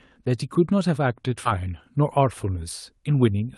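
At 1.45 to 1.47 s the speech jumps forward: a skip ahead, where roughly four tenths of a second of audio was thrown away while later packets were already queued, likely by the call's jitter buffer shedding excess delay. Nothing fills the join, so the sound before and after butts together almost directly. Unlike a dropout or packet-loss concealment, there is no silence, buzz or smeared filler. The speech simply lurches ahead, under the call path's top end of around 12 kHz.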